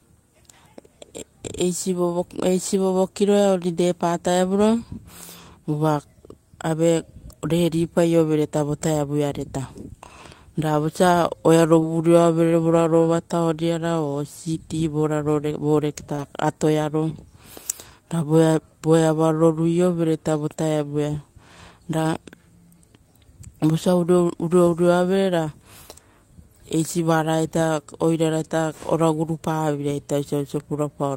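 Short concealed packet loss occurs at 11.79–11.83 s and 16.15–16.20 s. Each time, about 20 ms of speech, which fits one lost packet, arrived too late. The decoder extended the preceding sound for 19 and 27 ms, leaving a brief smear before the real signal resumed.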